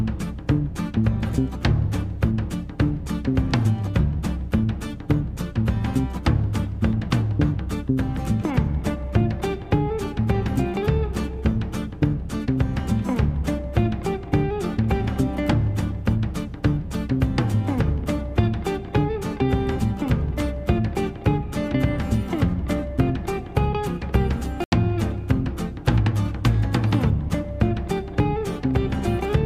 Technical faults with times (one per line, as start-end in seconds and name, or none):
24.64-24.72 block of digital silence